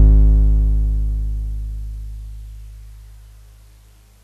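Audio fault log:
Music clip: no faults detected.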